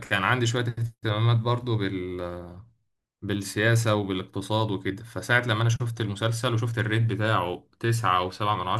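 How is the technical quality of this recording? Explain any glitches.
Nothing glitchy turns up anywhere in this speech recording, so there's honestly nothing here that needs explaining.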